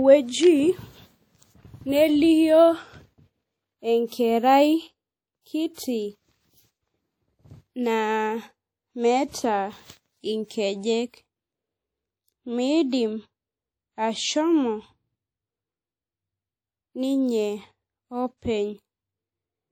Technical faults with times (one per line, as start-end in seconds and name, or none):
0.00-19.72 WMA compression
5.74-5.77 pre-echo
10.46-10.50 pre-echo
11.09-11.14 pre-echo